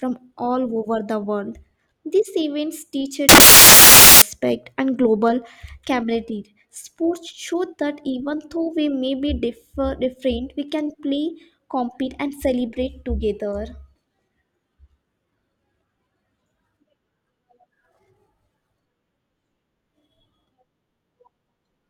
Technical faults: samples built from the wrong bytes

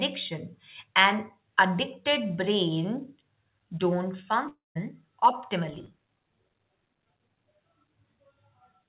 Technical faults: long network dropout; filter restarted on every block

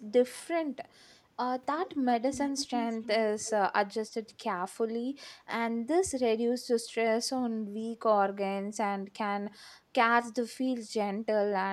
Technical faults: echo leak

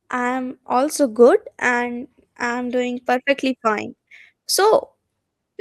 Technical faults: none

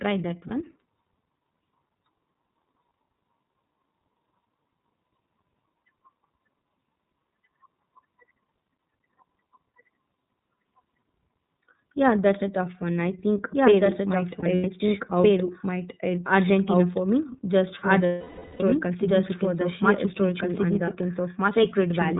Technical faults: doubled audio track; iLBC codec; lost iLBC frames

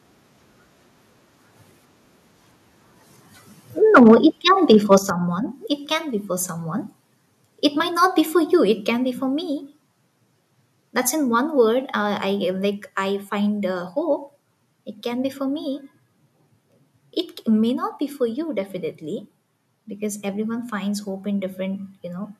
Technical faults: microphone overload; microphone volume stepped down

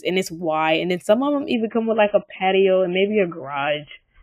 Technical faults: adaptive stream at a lower bitrate

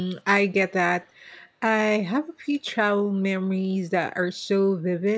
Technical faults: echo leak

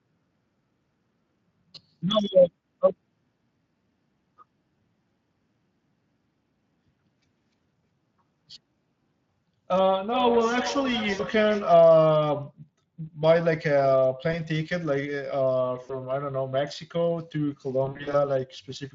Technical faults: Speex codec; VoIP packet loss concealed by the speech codec; feedback echo between two devices

